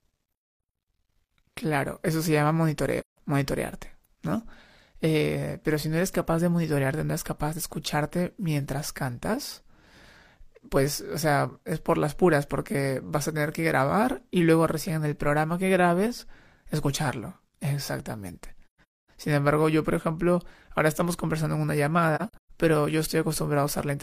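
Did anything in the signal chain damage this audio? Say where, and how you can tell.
Yes. AAC frame loss with muting, at the codec and transmission stage, leaves three soft-edged gaps in the speech: 3.00 to 3.18 s, 18.67 to 19.10 s, and 22.15 to 22.51 s. The last two are broken holes, the longest stretch near 0.3 s. Whole compressed frames never reached the decoder, so it zeroed their spectrum. The overlapping transform windows fade the sound out and back in.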